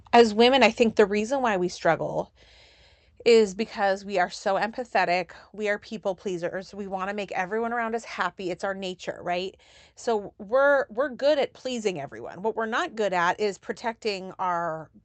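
Speech, with two faults near the start. Microphone overload hits at 0.14 to 0.21 s and 0.62 to 0.67 s. Peaks run about 3 dB and 4 dB past the converter's limit, and a small share of samples have flattened tops. The likely cause is input volume set too high. It sounds harsh and crackly. Microphone volume stepped down follows at 0.21 s, 1.2 s and 3.63 s. The level drops suddenly by about 2, 3 and 4 dB. The second drop lands just before "why we struggle", the third just before "we are so empathetic". Call software likely lowered the input gain after finding the microphone too loud or clipping.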